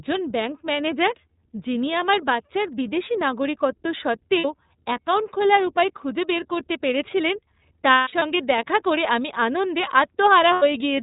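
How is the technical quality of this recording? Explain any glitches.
The quality is clearly limited. This is narrowband, coded speech with audible dropouts in three places.

Throughout you're hearing the iLBC codec. Nothing above 4 kHz gets through, so the speech sounds boxed-in and a bit rough and synthetic. The coding damage is plainly audible. iLBC codes each frame's excitation on its own, and here those frames are 30 ms long. The general texture fits iLBC's 13.33 kbps mode.

The glitches are lost iLBC frames. When packets go missing, the decoder fills the hole by repeating the last pitch cycle mixed with some noise. That gives a held, slightly buzzy, breathy vowel in place of the real sound. The first loss comes at 4.38 to 4.45 s, right after "আমার বাচ্চার বিদেশী নাগরিকত্ব" and before "অ্যাকাউন্ট খোলার উপায় খুঁজে". It lasts about 60 ms, which fits two lost frames. Because each frame stands alone, the voice snaps back almost immediately.

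The worst patch is 7.91 to 8.23 s, between "খুঁজে বের করতে পেরেছিলেন" and "দেখা করে আমি আনন্দে". About 210 ms of audio is missing, scattered across 300 ms. The longest gap is around 150 ms. A last, shorter dropout of about 90 ms hits at 10.53 to 10.63 s with the same buzzy hold.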